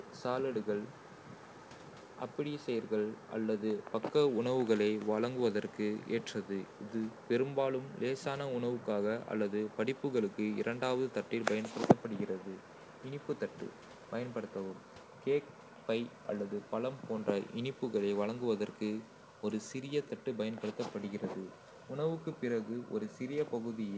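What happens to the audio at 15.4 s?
Nothing goes wrong at 15.4 s: the speech continues intact through the call path, whose coding leaves it band-limited with nothing above 8 kHz.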